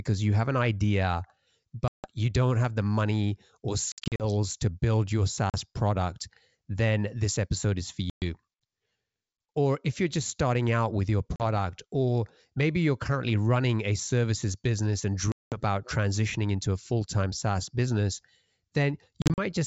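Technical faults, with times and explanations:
1.88–2.10, 3.92–4.24, 5.50–5.57, 8.10–8.23, 11.36–11.42, 15.32–15.57 and 19.22–19.39 s, packet loss on an ADPCM call: gaps of 40 to 200 ms, scattered in short runs at 3.92 and 19.22 s, show as flat silent waveform holes and blank vertical bands across the wideband G.722 spectrum. Losing packets desynchronises the decoder's predictor and step size, so speech returns slightly distorted before settling.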